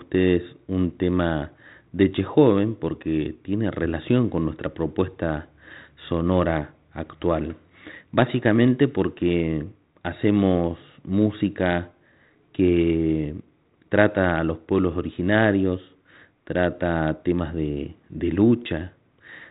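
Nothing stood out as a problem on listening to this speech recording, which comes through the 32 kbit/s G.726 telephone coding.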